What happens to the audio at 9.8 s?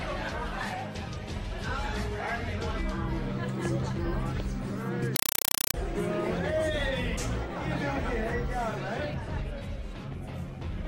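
Nothing goes wrong at 9.8 s; the audio plays through that moment intact, with no dropout, click or other fault.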